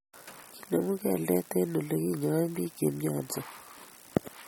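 MP3 compression damage runs through this speech recording from start to finish, and the encoding is likely the cause. Nothing is left above 18 kHz, where the encoder drew a hard treble ceiling, and the artefacts are plainly audible, which fits a low bitrate of around 48 kbps. With too few bits to go round, weak frequency components are dropped and then restored from one frame to the next, giving the sound a watery, swirling texture, with sibilants turning metallic and sharp onsets smearing.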